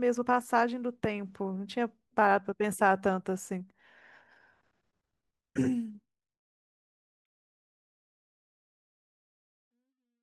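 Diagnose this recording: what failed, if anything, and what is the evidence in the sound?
No faults detected.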